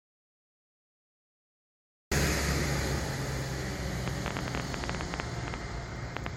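A clip of everyday sounds with two problems. It opens in an audio dropout to silence that's already going when the clip starts, dead silence with no room tone until 2.12 s, likely a lost input or a stray mute. Then from 4.08 to 6.27 s there's a train of clicks, about 9 a second at an uneven pace, roughly twenty of them, sticking out around 10 dB above the sound, likely from interference or a faulty connection.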